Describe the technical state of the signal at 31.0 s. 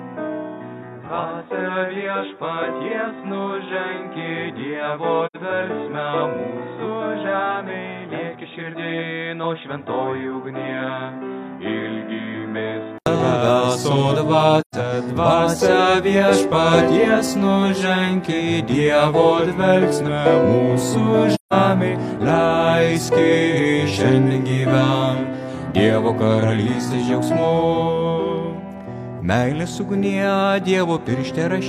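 No fault is audible at 31.0 s, and the signal there is intact.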